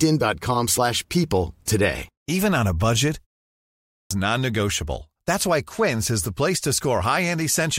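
After "on a budget", a 0.31 s pause lets the output sleep. This clipped start after a pause loses 3.49 to 4.11 s, and speech bursts in mid-sound rather than fading back.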